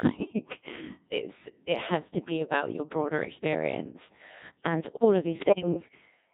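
From the start, the speech carries the heavy damage of the Codec 2 vocoder. The decoder rebuilds the voice from sine waves using only pitch, voicing, level and a coarse spectral envelope, so the original waveform is gone and the result is buzzy and robotic. The sparse detail fits the 1.6 kbit/s mode. On a spectrogram the harmonics look unnaturally regular and smeared, with blurred consonants. The waveform shows smooth, synthetic periodic shapes instead of natural speech cycles.

From 5.40 to 5.89 s, bit errors on digital voice radio corrupt the vocoder's frame parameters, which fits an error rate of a few percent. Each flipped bit changes the pitch, level or spectral shape of a whole frame, so the voice suddenly warbles, bleeps and jumps in pitch and tone. On a spectrogram the harmonic stack jumps up and down from frame to frame. The waveform shows abrupt, blocky level changes.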